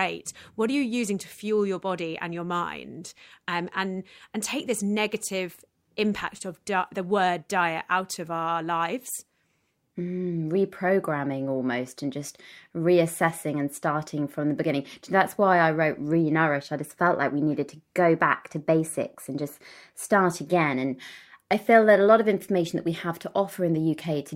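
No technical faults are audible.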